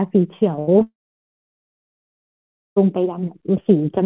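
Right at 0.56 to 0.60 s there's a short concealed packet loss: about 20 ms never arrived, so the receiver stretched the previous sound and you hear a quick smear. It runs straight into a burst of packet loss from 0.60 to 0.69 s, where about 80 ms went missing and the held-over sound decays into a fading buzz or hiss before real audio returns. At 0.79 to 0.82 s another short concealed loss leaves a brief wobble. From 0.82 to 2.78 s there's what's likely a long network dropout. The concealment carries the last sound only briefly, then almost two seconds sit near silence until the audio picks up again further on. Throughout, the call path's narrowband sound tops out at 4 kHz, which fits G.711 at 64 kbps.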